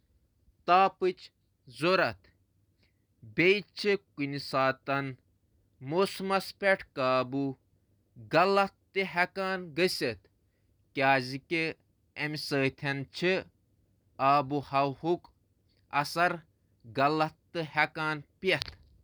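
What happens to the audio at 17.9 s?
Nothing goes wrong at 17.9 s: the speech there is intact, with no dropout, click, distortion or other fault to be heard.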